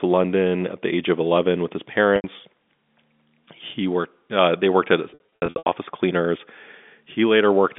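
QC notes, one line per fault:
2.16–2.24 s, packet loss with pitch repetition: 80 ms of audio was lost, which fits four 20 ms packets, and the receiver repeated the last pitch period while fading it, so the speech briefly holds on a buzzy tone.
5.10–5.66 s, packet loss with pitch repetition: 340 ms was lost in gaps scattered over 560 ms, none longer than 80 ms, so repeated pitch periods bridge each gap and the speech repeatedly stalls into a held, buzzy sound.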